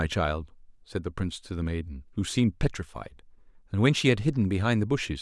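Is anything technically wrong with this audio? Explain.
No, nothing technically wrong can be heard in this speech recording. There is no fault to point to anywhere in the clip.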